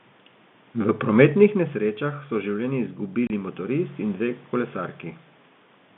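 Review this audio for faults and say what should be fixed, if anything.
At 3.27 s the speech drops out for 30 ms, ending at 3.30 s, with hard edges. This is packet loss filled with silence: audio never reached the receiver, and it played zeros instead of concealing the gap, which fits one lost packet of about 30 ms. On a waveform it is a flat line with abrupt cliffs at both ends; on a spectrogram, a blank vertical strip. Enabling packet loss concealment in the receiver would replace such gaps with smooth, extrapolated audio.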